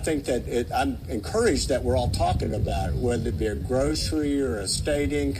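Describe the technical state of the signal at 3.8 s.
At 3.8 s the signal sits inside a time-stretched section running from 2.40 s to the end at 5.40 s, slowed to about 0.67× speed with pitch held. The likely cause is software repeating short pieces, leaving the sound dragging. On a spectrogram, harmonics stay at the same frequencies while features stretch horizontally, with duplicated fragments in the waveform.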